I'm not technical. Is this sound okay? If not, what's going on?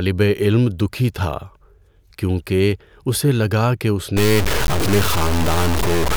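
No. From about 4.17 s, right after "اسے لگا کہ اس", to the end of the clip, the speech turns harsh and grainy, like it's being pushed through sandpaper. The roughness rises and falls with the voice, nearly as loud as the speech itself, and the softest moments break up or sputter. This is likely low bit depth without dither: the sound was stored with very few volume steps, which fits about 3 bits, and simply chopped to fit, with no added smoothing noise.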